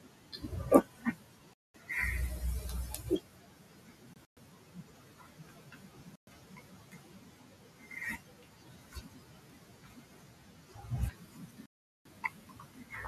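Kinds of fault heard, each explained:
Speech cut by the noise suppressor: Soft consonants, word endings and quieter passages sound swallowed, pulled down by up to about 12 dB. The suppressor mistook parts of the speech for the room noise, which sits about 27 dB below the speech, and turned them down with it. This happens from 0.0 to 0.51 s, 0.84 to 1.89 s, 3.02 to 7.92 s, 8.18 to 10.86 s and 11.11 to 12.93 s.
Bluetooth dropout: The sound vanishes into silent holes and then resumes further along, as if it had kept playing. The likely cause is audio packets failing to reach the headphones in time and being discarded. The holes fall at 1.53 to 1.76 s (about 0.21 s), 4.14 to 4.38 s (scattered gaps totalling about 0.14 s), 6.16 to 6.29 s (about 0.12 s) and 11.66 to 12.07 s (about 0.39 s).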